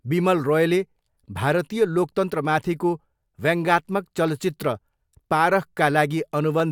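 From 0.38 to 6.6 s, clicks recur every 0.69 s during speech, likely clock drift buffer slips of a few samples from mismatched clocks. Their strict regularity distinguishes them from random dropouts.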